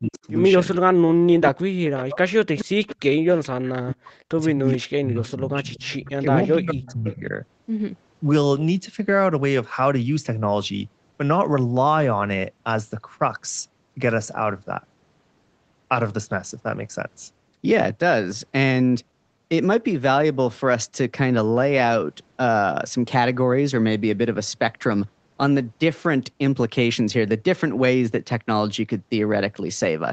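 From 0.0 to 0.26 s the speech dips by about 35 dB. This is speech suppressed in double talk. The echo canceller likely confused it with far-end sound. At 0.14 s a faint echo leak appears. A copy of earlier sound, delayed 429 ms, sits about 25 dB down. From 1.24 to 7.34 s the speech is cut again, by up to about 40 dB, across roughly four seconds in pieces. Echo leaks sound at 1.84 s, from 2.58 to 3.48 s, and from 4.74 to 7.15 s. Each is the same 429 ms delayed copy. The last rises to about 20 dB below the speech.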